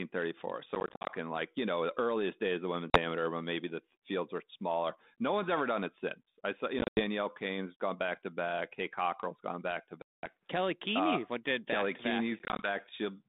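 Packet loss on an ADPCM call breaks the speech at 0.75–1.11 s (170 ms lost, longest run 50 ms), 2.90–2.99 s, 6.79–7.01 s, 10.02–10.27 s (210 ms lost) and 12.39–12.67 s. The missing packets leave hard-edged silent holes, seen as vertical blank columns in the spectrogram and flat gaps in the waveform. Afterwards the decoder's predictor and step size no longer match the sender's, so the speech on the 32 kbit/s line returns with brief distortion.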